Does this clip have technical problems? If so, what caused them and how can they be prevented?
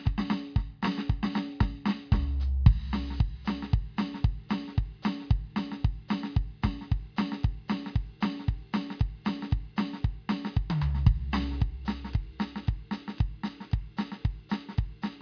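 No, the music runs without any audible technical fault, so there is nothing here to trace to a cause or to prevent.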